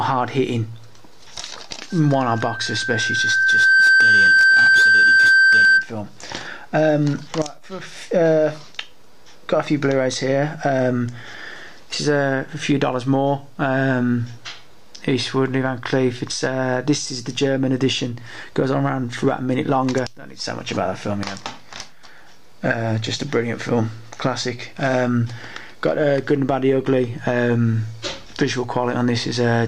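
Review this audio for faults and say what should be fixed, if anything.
Loudspeaker feedback squeal runs from 1.90 s to 5.89 s: a 1.6 kHz tone swells over roughly two seconds until it sits about 10 dB above the rest of the audio. The microphone is hearing its own loudspeaker, and at 1.6 kHz the loop gain tops one, so that frequency feeds itself. A spectrogram shows one bright horizontal line; the waveform envelope balloons. Lower monitor gain, reposition the microphone, or notch 1.6 kHz.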